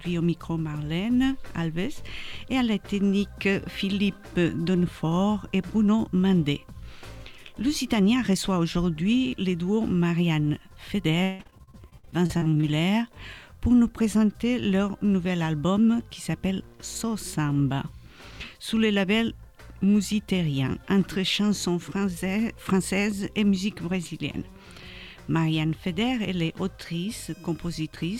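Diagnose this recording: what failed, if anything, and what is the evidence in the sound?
The failure is in the network stage: repeated packet loss (robotic sound) between 11.23 and 12.65 s. Over that 1.4 s stretch the audio breaks into a rapid run of short holes, the longest about 157 ms. The receiver's concealment stretches the last good sound across the holes, covering about 39% of the span and producing a choppy texture. About 600 ms of audio is missing, so pieces are audibly lost.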